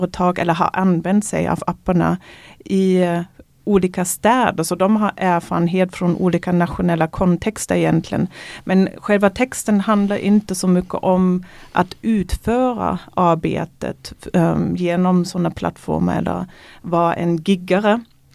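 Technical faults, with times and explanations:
There are no technical faults, so there are no times or explanations to give.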